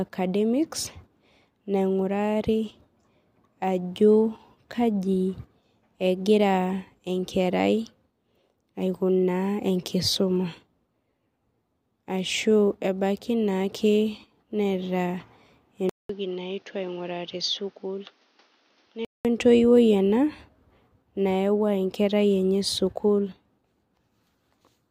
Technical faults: input switched to a poorer device

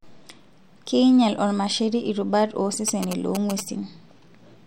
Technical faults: GSM signalling bursts

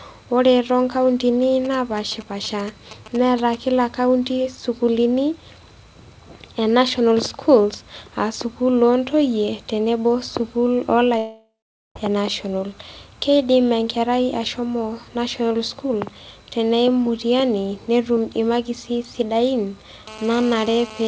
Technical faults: GSM signalling bursts; long network dropout; GSM phone buzz

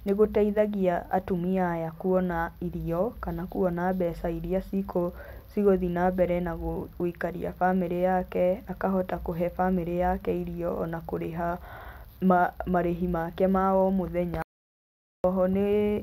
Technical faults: audio dropout to silence

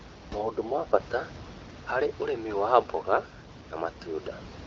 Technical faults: none

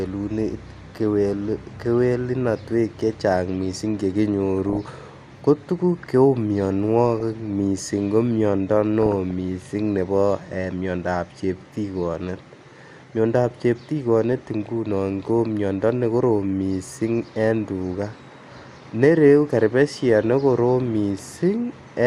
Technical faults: MP2 compression; DAB burbling

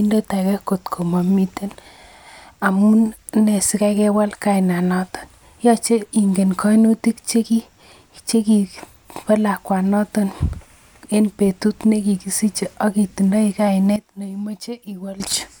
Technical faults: sudden gain jump

